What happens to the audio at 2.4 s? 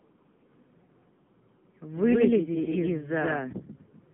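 A doubled audio track runs from 1.97 to 3.53 s. A second, equally loud copy trails by about a tenth of a second, likely from a slower capture path. It sounds like a dry echo that starts and stops abruptly. The AMR narrowband mobile codec at 6.7 kbps also applies here. Nothing above 3.7 kHz passes, leaving the speech buzzy and synthetic.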